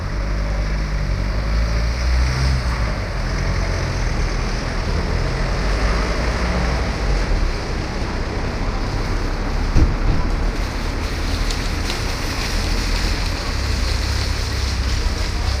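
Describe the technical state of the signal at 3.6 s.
At 3.6 s the signal is intact, with no dropout, clipping, glitch or other fault in the sound at that moment.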